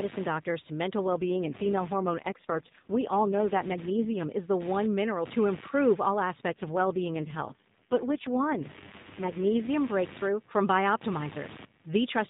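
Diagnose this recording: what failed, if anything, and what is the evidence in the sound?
Computer activity noise, analogue wiring: a buzz pulsing about 100 times a second sits roughly 20 dB under the speech throughout, rising and falling with processor load, seen as vertical comb striations on a spectrogram.

AMR rate drop, network and codec: from 0.98 to 4.28 s after "doctors to" and 6.48 to 9.71 s after "mineral to improve all", the speech turns buzzier and more synthetic. The link forced 12.2 down to 4.75 kbps, and the spectrogram loses fine harmonic detail below 4 kHz with no gap.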